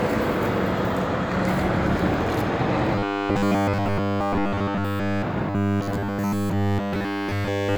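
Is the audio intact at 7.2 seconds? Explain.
No. From 5.50 s to the end, audio likely arrived too seldom, so a roughly 10 ms buffer kept repeating, producing robotic sound from repeated short buffers: a rigid, metallic 100 Hz buzz.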